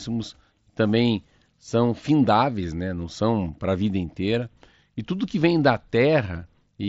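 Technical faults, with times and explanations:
The speech carries its full band up to about 7.7 kHz through a Bluetooth mSBC headset codec, with only the light graininess on louder passages that this wideband link leaves, and no technical faults can be heard.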